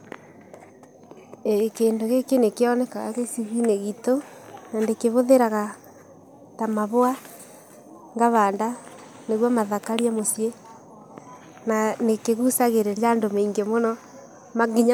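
Nothing here stands out as a technical fault, and the speech runs along with no glitch, dropout or distortion to point to at any moment.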